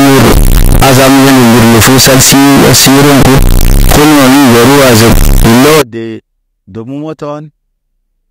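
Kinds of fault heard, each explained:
Float read as integer: likely 32-bit float samples read as integers, so quiet noise is as loud as speech, a harsh near-square wave at a nearly fixed high level, unlike clipping.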